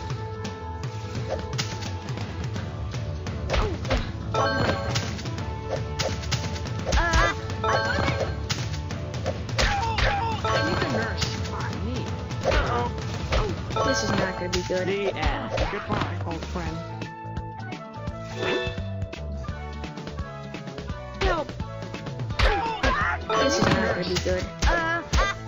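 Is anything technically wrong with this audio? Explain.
Yes. A block size mismatch (truncated) runs throughout, from start to finish. One stage hands over blocks longer than the next stage reads, so the tail of every block is cut off and the following block begins abruptly. Each cut is a small discontinuity, and these repeat at 43.1 Hz, which fits 1024-sample blocks. The result is a steady low buzz under the sound. Pitch holds at its normal level, and the speed stays essentially unchanged.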